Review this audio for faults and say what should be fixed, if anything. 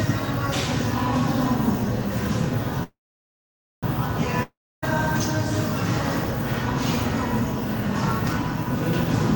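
Call audio freeze, 2.83 to 3.85 s: the last sound smears into a fading buzz, then about 0.89 s of silence, and the audio resumes exactly where it stopped. Nothing is lost, but playback now runs about 1 s later. The likely cause is packets stalled in transit, draining the jitter buffer until they arrived.

Long network dropout, 4.43 to 4.84 s: again a brief fading tail, then about 0.29 s of silence, but the audio returns further along, skipping about 0.4 s of material. Here the likely cause is packets that never arrived, so that stretch was discarded.

To prevent both, fix the network path's congestion and loss (prioritise the audio traffic, or move off the unstable link), with an adaptive jitter buffer and forward error correction to absorb what remains.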